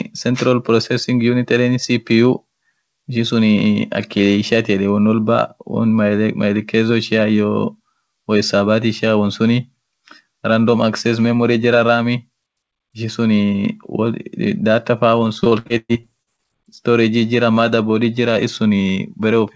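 Speech, with repeated packet loss (robotic sound) from 15.40 to 16.40 s: about ten holes, the longest around 117 ms, patched by stretching the previous sound, so roughly a third turns choppy. Unlike a single dropout, the gaps recur rapidly. Above 8 kHz nothing remains, which fits the G.722 wideband call codec.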